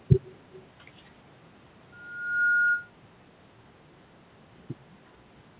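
Speech, with a faint echo leak from 0.53 to 0.66 s: a delayed copy of the voice about 350 ms behind, roughly 25 dB down, likely loudspeaker pickup that the far end's echo canceller left in. Unlike room reverb, it is a distinct late repeat, not a smooth tail. The call path's narrowband limit, nothing above 4 kHz, can be heard throughout.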